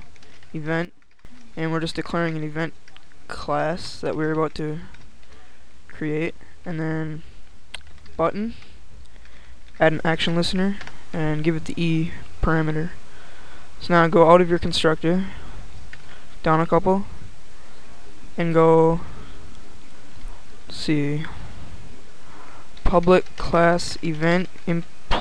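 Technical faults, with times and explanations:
0.85 to 1.25 s, sudden gain jump: the sound and its background noise drop together by about 12 dB in one step and return just as abruptly, likely a gain setting applied without a ramp. The waveform envelope shows a sharp rectangular notch, and the spectrogram shows a uniform darkening across all frequencies with a hard vertical edge at each end.
9.82 s to the end, sudden gain jump: the sound and the noise floor step up by about 6 dB at once and stay raised. The waveform shows a sudden widening of the envelope, and the spectrogram shows a clean vertical boundary where every band brightens.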